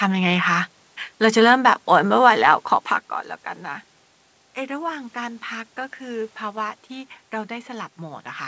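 No technical faults heard.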